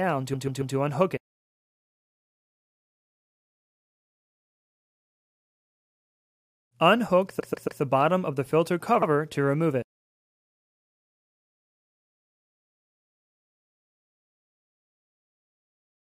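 Repeated frames at 0.33–0.75 s, 7.39–7.80 s and 9.01–9.08 s: a block of compressed audio, about 139 ms (twice replayed three times) then 70 ms (once), plays again, stuttering and lengthening the clip.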